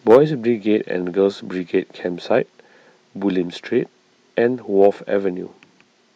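From 0.10 to 0.17 s, microphone overload puts a harsh, crackling edge on the loudest speech peaks. Their tops are flattened, with roughly a tenth of the samples held at the limit. The likely cause is input volume set about 6 dB too high for the converter.

At 0.15 s, mid-crackle, the microphone volume steps down by about 2 dB, likely because the call software reacted to the clipping. Voice and background drop together and stay lower. This lasting level change, with no added distortion, is what separates it from the overload.

A second, milder microphone overload runs from 4.82 to 4.87 s, about 2 dB over with roughly 3 percent of samples clipped, likely from the same high input volume. It is a brief crackle only, and the level does not shift.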